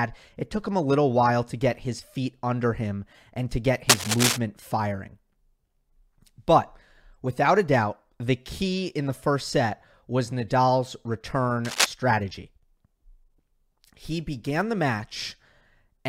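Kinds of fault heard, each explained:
Cable scratch noise: two rough, uneven rustling bursts at 3.89 to 4.37 s and 11.65 to 11.86 s, roughly as loud as the speech, likely from a worn cable or connector shifting. Unlike a single click, each scratches on for a fraction of a second.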